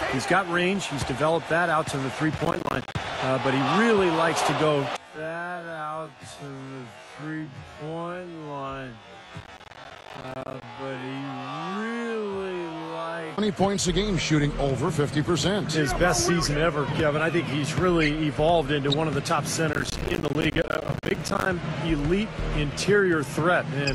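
Processor overload crackle shows up three times in this audio: 2.38 to 2.95 s, 9.40 to 10.63 s, and 19.73 to 21.46 s, each burst longer than the one before. In each stretch the processor keeps missing its buffer deadlines, and every miss drops in a short hard-edged silent gap, apparently around 10 ms, which fits a small processing buffer. Dozens of these gaps in a row make a gritty crackle over the sound that stops once the load eases.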